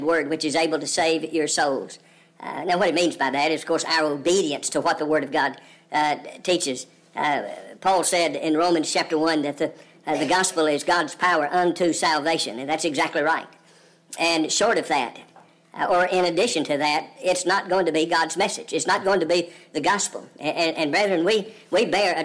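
From start to finish the audio runs about 1.38 times too fast and sits roughly 5.5 semitones high, the classic wrong sample rate signature. Samples are being clocked out faster than they were captured, which fits 16 kHz material played at 22 kHz, so everything sounds squeaky and rushed.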